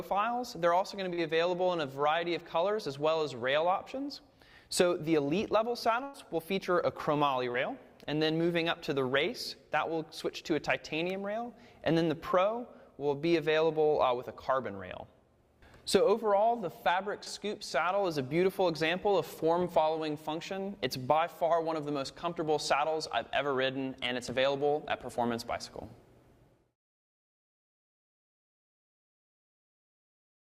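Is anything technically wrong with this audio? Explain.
Yes, there are dropouts from the network. Short concealed packet loss shows up at 1.13 to 1.19 s, 7.52 to 7.56 s and 17.24 to 17.28 s. Each time roughly 20 to 40 ms never arrived, and the receiver patched the hole by extending the previous sound, so you get a quick smear or wobble.

There's also a burst of packet loss at 6.03 to 6.16 s. About 100 ms went missing in a row, and the decoder covered all of it with a continuation of the last sound, with no silence. It's a held, fading stretch, and the audio then picks up further along with that chunk gone.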